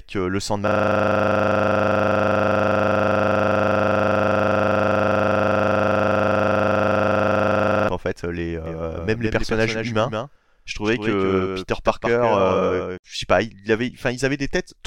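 From 0.68 s to 7.89 s a system hang loop occurs: the computer or driver stalled while the sound hardware kept replaying one 40 ms stretch of its ring buffer, about 180 times over. The speech gives way to a steady, rough 25 Hz buzz.

From 8.66 s to 12.98 s there is a doubled audio track, likely from a second, slower capture path or a misaligned edit. A dry, full-band copy about 5 dB quieter trails the speech by roughly 150 ms and switches on and off abruptly.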